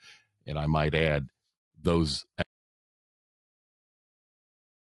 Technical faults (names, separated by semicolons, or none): low-delay AAC compression; audio dropout to silence